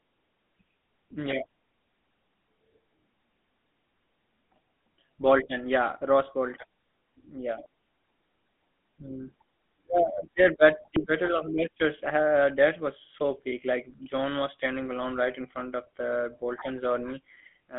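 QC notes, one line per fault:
throughout, GSM full-rate codec: the speech has a plainly audible buzzy, gravelly roughness, thin telephone-band tone from roughly 200 Hz to 3.5 kHz, and nothing at all above 3.8 kHz. The codec rebuilds the vocal tract from a compact filter model and excites it with a regular pulse train sampled at only every third point, so fine harmonic detail turns into grainy buzz. The damage level fits a 13 kbps full-rate channel.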